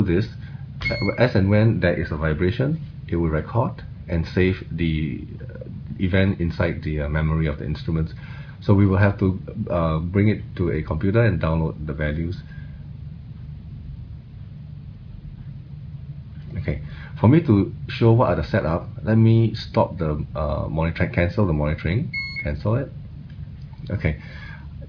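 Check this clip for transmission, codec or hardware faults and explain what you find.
Nothing faulty turns up anywhere in this recording.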